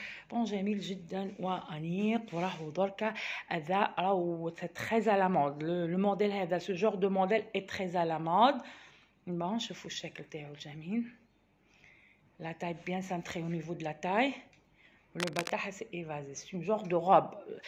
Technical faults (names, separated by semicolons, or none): cable scratch noise